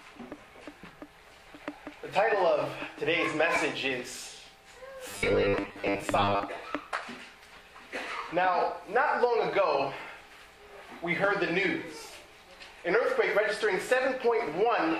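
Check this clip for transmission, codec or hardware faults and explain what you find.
One fault, from 5.11 to 6.43 s: robotic sound from repeated short buffers. Audio likely arrived too slowly, so playback repeated 10 ms chunks, roughly half the material, forcing a rigid 100 Hz metallic buzz. A spectrogram shows flat harmonic stripes every 100 Hz, and the waveform shows identical repeating cycles.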